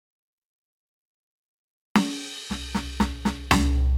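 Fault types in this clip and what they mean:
No fault types are present in this clip of music.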